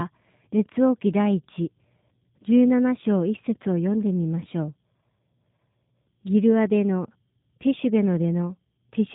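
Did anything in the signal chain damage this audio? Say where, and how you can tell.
Yes, at the codec stage: G.729 squeezed the whole clip, with nothing above 3.8 kHz and a plainly rough, synthetic buzz, which fits a low-rate 8 kbit/s pulse-and-pitch-model reconstruction.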